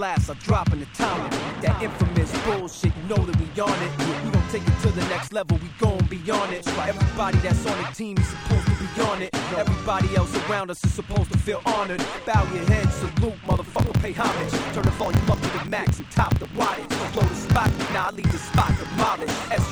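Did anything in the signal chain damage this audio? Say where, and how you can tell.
Yes, from 13.44 s to the end there is a block size mismatch (truncated) in the driver or buffer stage. A buzz at 46.9 Hz appears and the sound runs about 1.12 times fast, which fits one stage reading 1024-sample blocks while the previous one writes longer blocks and loses each block's tail. A spectrogram shows a 46.9 Hz harmonic comb. The waveform shows a discontinuity at every block boundary.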